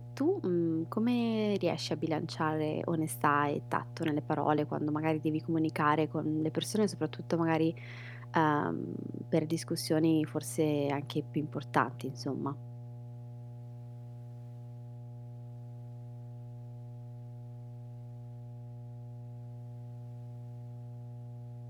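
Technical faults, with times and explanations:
Throughout, mains hum: a steady low tone at 60 Hz sits under the speech for the whole clip, with some low harmonics above it, at roughly 15 dB below the level of the speech. It comes from the power line's alternating current leaking into the signal path, typically through a ground loop between connected equipment or magnetic coupling from a nearby transformer, so it never varies or stops.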